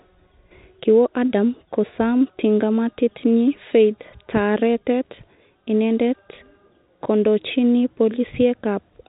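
No technical faults can be heard in this speech, which comes through a G.711 mu-law call path that carries nothing above 4 kHz.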